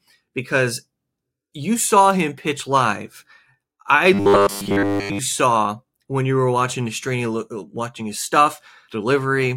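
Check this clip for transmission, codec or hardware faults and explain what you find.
One fault is present: robotic sound from repeated short buffers, from 4.14 to 5.19 s, ending just before "saw when you were". The likely cause is that new audio stopped arriving in time, so the playback software looped a short slice of the last received audio instead of playing the real stream. The buzz sits at 100 Hz, which fits a slice about 10 ms long. For that full second the speech becomes a rigid, metallic drone.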